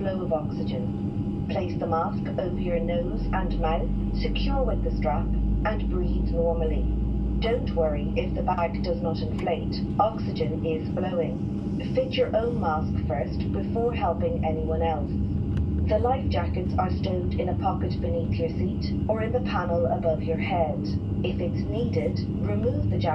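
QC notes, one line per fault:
No faults heard anywhere in the clip.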